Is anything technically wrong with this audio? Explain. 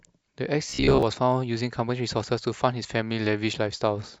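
Yes. From 0.70 to 1.03 s the speech has a robotic sound from repeated short buffers. New audio likely arrived too seldom, so a fragment of about 15 ms was looped in place of most of the real signal. This imposes a rigid, metallic 66.8 Hz buzz that only loosely follows the speech.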